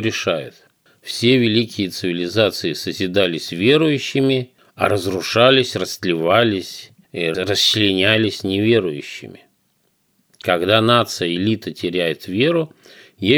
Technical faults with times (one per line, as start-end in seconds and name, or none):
none